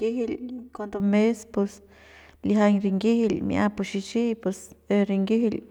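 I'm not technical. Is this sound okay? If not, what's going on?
No. For the first second, up to 1.0 s, the speech sounds hollow and phasey. That is channel delay (comb filtering). One side arrives about 3 ms late, and mixing both cancels evenly spaced tones, starting near 200 Hz. It clears before "mes pus lijiañ rinyijil".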